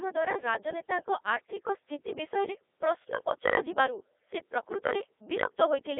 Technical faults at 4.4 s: Codec 2 vocoder

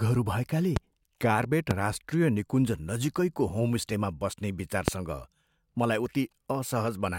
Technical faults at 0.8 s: loud pop

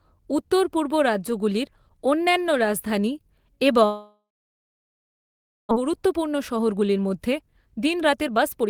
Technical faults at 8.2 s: jitter buffer speed-up

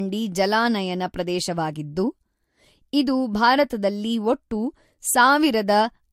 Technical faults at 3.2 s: transcoding between lossy codecs

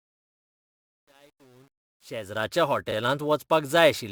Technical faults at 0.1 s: sample clock jitter; truncation distortion on a fade

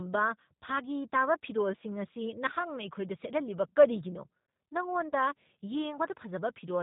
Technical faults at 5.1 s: G.729 codec; VoIP packet loss concealed by the speech codec

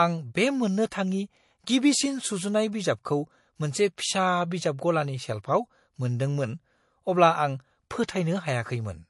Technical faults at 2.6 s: low-bitrate audio saved at a high bitrate

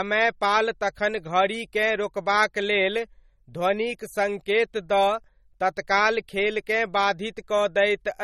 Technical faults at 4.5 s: MP3 compression

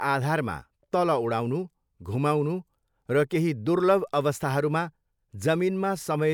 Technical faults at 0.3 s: none

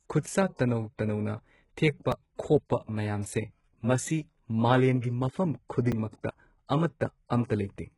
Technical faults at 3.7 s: HE-AAC compression

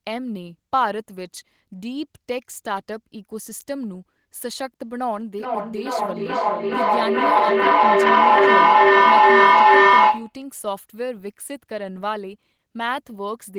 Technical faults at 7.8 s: feedback echo between two devices

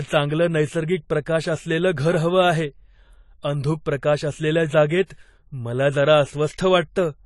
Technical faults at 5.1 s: AAC compression; pre-echo

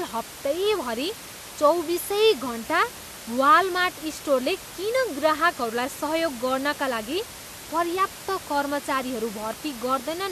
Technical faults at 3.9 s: none

